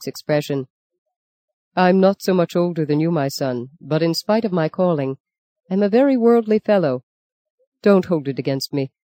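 No technical faults are audible anywhere in the audio.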